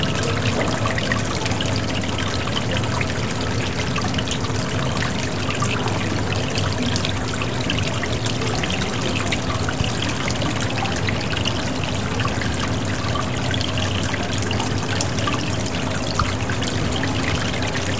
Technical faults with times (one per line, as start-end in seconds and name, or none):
none